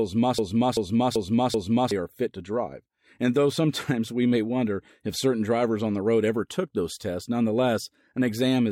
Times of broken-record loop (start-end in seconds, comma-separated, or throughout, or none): 0.39-1.91